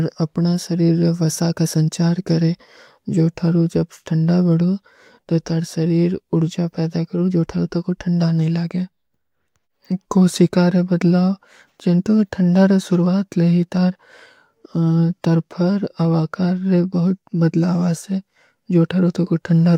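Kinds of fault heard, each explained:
No faults come through here; the speech simply runs its course without anything technical getting in the way.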